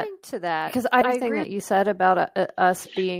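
A doubled audio track runs from the start of the clip to 1.44 s. It is already under way at 0.0 s, and it cuts off abruptly at 1.44 s. A second full-band copy of the speech trails the original by roughly seven tenths of a second, at about 5 dB below it. The copy has no added reverberation or decay, so it sounds like a clean, detached repeat rather than an echo. The likely cause is the same signal reaching the mix twice, once through a slower capture path.

A skip ahead occurs from 1.01 to 1.03 s. Playback jumps forward over roughly half a second of speech, and the missing stretch is not filled with silence or substitute audio. The material on either side is joined almost directly, so the sound lurches from one moment to a later one with a missing chunk in between. This points to buffered audio being discarded while newer packets were already queued, which shortened the playback delay by about half a second.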